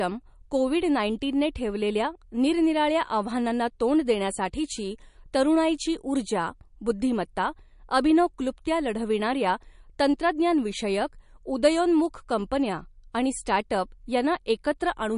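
From start to finish the speech carries plainly audible coding damage, likely from MP3 compression. Nothing is heard above 10.6 kHz. The treble stops at that point, so the s sounds lose their air. The encoder seems short of bits, which fits a low bitrate of around 40 kbps. Weak frequency lines drop in and out from frame to frame. That leaves a watery, swirling texture, and sharp onsets sound smeared.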